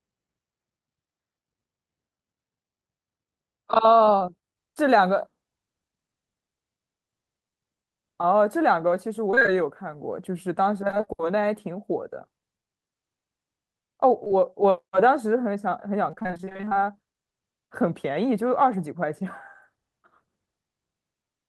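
Around 4.05 to 4.09 s, a short concealed packet loss occurs. About 20 ms of the speech arrived too late for the decoder, and the receiver bridged the hole by extending the preceding sound for roughly 15 ms before blending back into real audio. The result is a brief smear or wobble, and a quick consonant can drop out.

From 9.31 to 9.58 s, repeated packet loss (robotic sound) sets in. Five separate holes, each at most about 22 ms, were each patched by continuing the last sound, so nearly half the stretch is synthetic. The speech turns choppy, with fragments missing.

The same failure returns from 10.87 to 11.09 s, with six holes, none longer than about 19 ms, totalling around 120 ms lost. That gives another burst of choppy speech.

At 14.24 to 14.28 s and again at 14.28 to 14.32 s, two short concealed packet losses land back to back. Each is about 20 ms of missing audio, filled by extending the prior sound. 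Together they make a slightly longer smear or wobble.

The longest run of repeated packet loss spans 16.11 to 16.79 s. Sixteen holes of up to about 22 ms arrive in quick succession, and around 300 ms of the 320 ms lost is filled in. Nearly half of this stretch is concealment, so the speech sounds choppy and broken.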